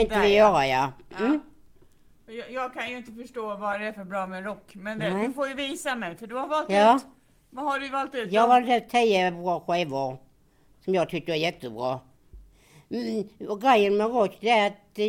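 From 3.74 s to 10.21 s, a call bitrate drop makes the sound rough and muffled, consistent with roughly 128 falling to 24 kbps. Unlike a fixed filter, the dullness recovers.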